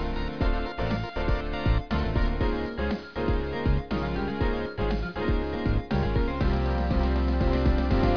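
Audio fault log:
No faults found; nothing in the audio to log.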